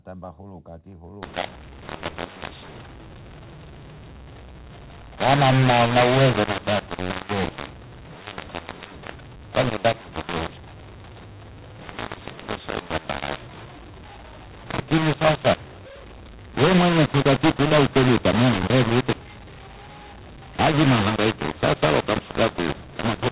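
From 1.23 s to the end, the speech turns harsh and gritty. This is mu-law and A-law mixed up: telephone audio stored with A-law coding is being decoded as mu-law. Each 8-bit code lands on the wrong step of the logarithmic scale, so some levels come out too large and others too small. The quietest samples are pushed well above silence, so the pauses fill with a steady hiss. That lifted floor in the gaps is what sets it apart from clipping or overload, which distort only the loud peaks and leave the silences clean. The band still stops near 4 kHz, which fits normal 8 kHz telephone coding.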